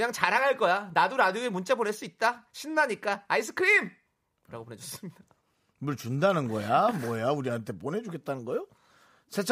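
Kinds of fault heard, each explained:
No technical faults are audible in this recording.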